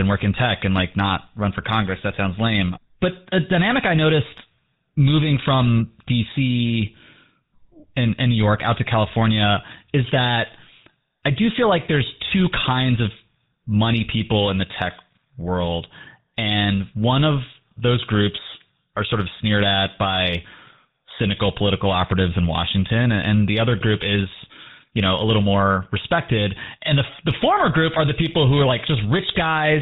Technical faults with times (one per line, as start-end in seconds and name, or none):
0.00-29.82 GSM full-rate codec